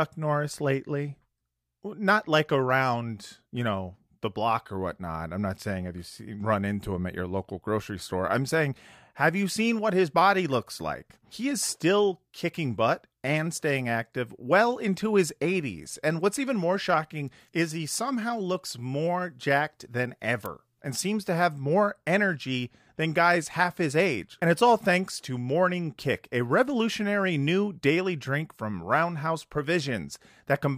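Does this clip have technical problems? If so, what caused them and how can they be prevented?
Yes. At 20.46 s a single sharp snap cuts across the speech, very brief and sitting on top of the sound rather than replacing it, peaking at roughly -20 dBFS. This is an electrical switching spike, likely from a nearby switch, motor or static discharge arcing and inducing a tiny burst of interference into the audio line. To prevent it, use balanced, shielded cabling kept away from power switches and motors, and suppress noisy appliances at the source.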